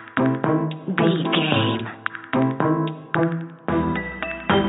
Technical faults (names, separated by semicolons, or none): none